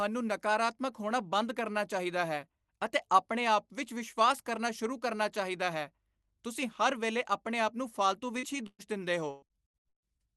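Speech carried over a call link whose top end stops at about 12 kHz, as a call codec such as Opus would produce. At 8.39 to 8.46 s there is a brief smear or wobble, a short concealed packet loss: about 40 ms of audio never arrived, so the receiver stretched the preceding sound for about 33 ms and blended back in. From 8.67 to 8.82 s the sound turns into a held buzz or fading hiss and then drops into about 40 ms of silence. This is a burst of packet loss in which about 120 ms went missing. The decoder continued the last sound and faded it before the audio resumed further on. From 9.31 to 10.22 s the speech becomes choppy and robotic. Repeated packet loss causes this, with seven separate gaps, the longest 130 ms. Roughly half of that stretch is patched-in continuation rather than real audio, so pieces of speech are lost.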